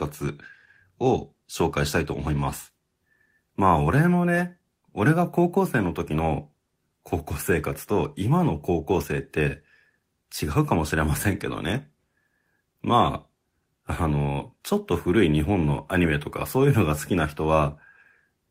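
No technical faults can be heard anywhere in the speech recording.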